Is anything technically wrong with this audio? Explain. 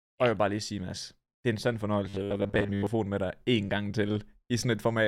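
Yes. From 2.09 to 2.87 s, robotic sound from repeated short buffers: audio likely arriving late makes a 10 ms slice loop, giving a metallic 100 Hz buzz, flat evenly spaced spectrogram harmonics and identical waveform cycles.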